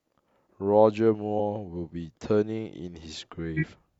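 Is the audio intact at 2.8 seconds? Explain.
Yes, the speech at 2.8 seconds is intact, with no fault present at that moment.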